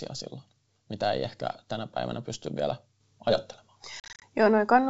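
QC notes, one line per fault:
4.00–4.22 s, packet loss on an ADPCM call: about 140 ms drops to silence in hard-edged gaps across 220 ms, the longest 40 ms, suggesting roughly fifteen lost packets. The decoder's predictor and step size drift from the sender's, so sound resumes slightly distorted.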